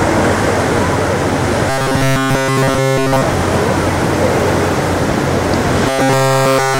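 From 1.70 to 3.22 s and from 5.88 s to the end, the audio becomes robotic sound from repeated short buffers: a rigid 134 Hz metallic buzz. The likely cause is a block of about 7.5 ms looping while new audio is skipped. A spectrogram shows flat, evenly spaced 134 Hz harmonics, and the waveform shows one identical cycle repeating.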